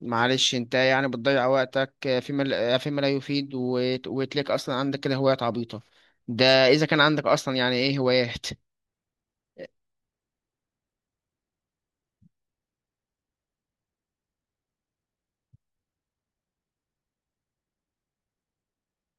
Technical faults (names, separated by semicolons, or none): none